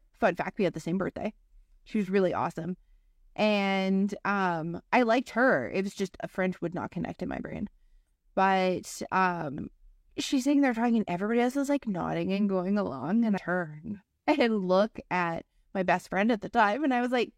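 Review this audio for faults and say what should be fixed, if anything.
A short glitch cuts through the speech from 13.33 to 13.38 s, lasting under a twentieth of a second. This is damaged data in a compressed stream: a stretch of the encoded file was corrupted, so the decoder misread the frames there, lost sync, and hunted for the next valid frame header before normal playback resumed. The fix is to replace that section from an intact copy or re-encode from the source. Verifying file integrity with checksums after every transfer or stream capture would prevent it.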